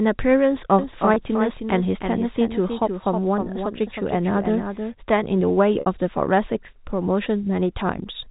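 Speech over a band-limited telephone path, consistent with G.711 A-law coding, carries a doubled audio track from 0.79 to 4.99 s. A full-band second copy trails the original by about 300 ms, roughly 5 dB quieter, with no decay or room colouring. It starts and stops abruptly, most likely because a slower capture path recorded the signal a second time. Packet loss with pitch repetition occurs at 1.14 to 1.16 s, a 20 ms gap that fits a single lost packet and sounds like a briefly held, buzzy tone. It occurs again at 5.80 to 5.86 s, where a 60 ms gap, consistent with three consecutive lost packets, is bridged by a repeated pitch period that fades out before the speech cross-fades back in.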